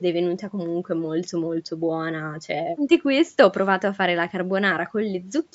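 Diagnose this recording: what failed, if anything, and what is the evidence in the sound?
Nothing failed: the speech shows only the expected marks of a call's microphone processing, with the lowest bass trimmed and no content above 8 kHz, and no stage of the chain gives audible evidence of a fault.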